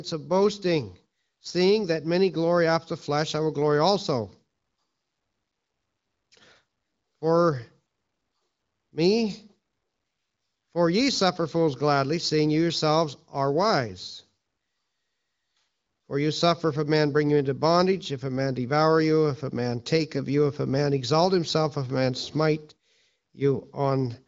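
No technical faults can be heard in this clip.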